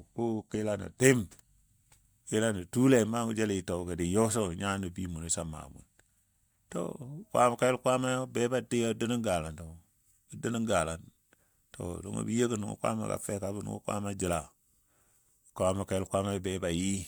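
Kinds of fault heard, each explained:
No technical faults are audible.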